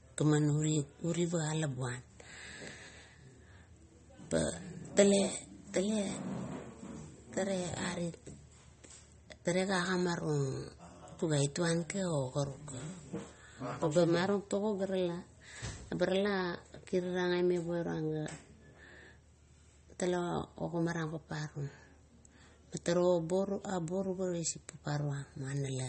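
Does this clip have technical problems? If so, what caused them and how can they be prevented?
Yes. Throughout, the audio was likely squeezed by MP3 compression at a bitrate low enough to suggest around 32 kbps, so the encoder cut everything above 8.4 kHz and dropped weak detail, leaving plainly audible watery, swirling artefacts and dulled s sounds. Encoding at a higher bitrate, or keeping an uncompressed master, would prevent this.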